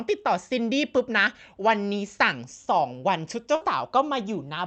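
At 3.55 to 3.63 s, a burst of packet loss interrupts the speech. The receiver conceals the gap by extending the last sound for about 55 ms as a fading buzz or hiss. The speech then resumes with roughly 60 ms skipped.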